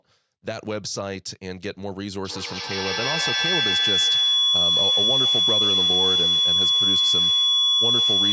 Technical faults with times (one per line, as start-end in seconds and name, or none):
2.25-8.32 feedback howl